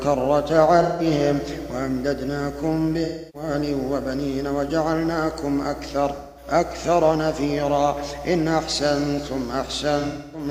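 AAC frame loss with concealment occurs four times: 0.82 to 1.06 s, 3.04 to 3.49 s, 6.15 to 6.47 s, and 9.99 to 10.48 s, where the gaps are scattered over about 340 ms with the longest run around 0.3 s. In each gap the decoder rebuilds the missing audio from the last good spectrum, with randomised signs or interpolated energy, so the sound turns smeared, noisy or phasey for roughly 170 to 300 ms. The lengths fit runs of four to seven lost frames.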